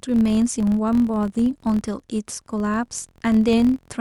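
Throughout, a filter restarted on every block adds a 43.1 Hz buzz that tracks the speech level, fitting 1024-sample blocks, seen as evenly spaced vertical ticks.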